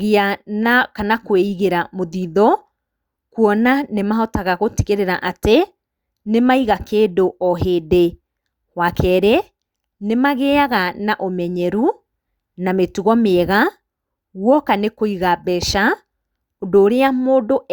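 No technical faults are audible anywhere in the recording.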